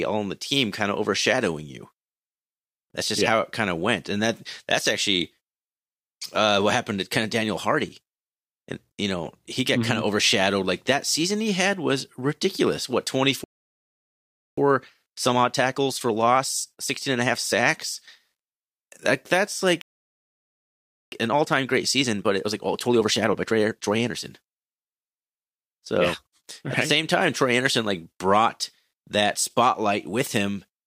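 At 13.44 s the speech halts in mid-flow and stays silent for 1.13 s, a playback stall, likely from the player running short of data. The speech resumes at 14.57 s. From there to 17.57 s comes time-compressed catch-up. The player trims and cross-fades small slices to clear its backlog, so the speech runs at 1.15 times normal speed. Pitch stays unchanged, which separates it from a simple speed-up. A second stall silences the audio from 19.81 s to 21.12 s, about 1.31 s, likely from the same data shortage. Catch-up follows from 21.12 s to 24.12 s at 1.25 times speed, noticeably more hurried, again at normal pitch.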